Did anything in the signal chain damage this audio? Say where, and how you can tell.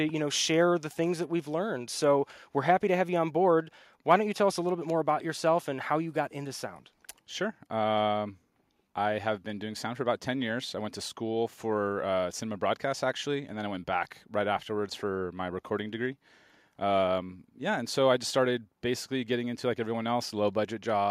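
No, nothing in the signal chain damaged this audio.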